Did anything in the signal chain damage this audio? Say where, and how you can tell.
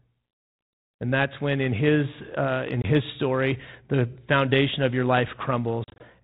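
Yes. Hard-edged dropouts cut the speech at 2.82 to 2.88 s and again across 5.84 to 6.04 s in gaps of up to 40 ms, each followed by slightly distorted speech. This is packet loss on an ADPCM call: lost network packets become silence, and the G.726 decoder's predictor and step size fall out of step with the sender's.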